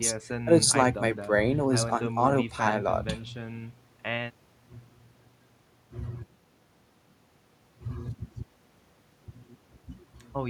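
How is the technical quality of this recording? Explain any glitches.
No glitches are audible anywhere in this recording.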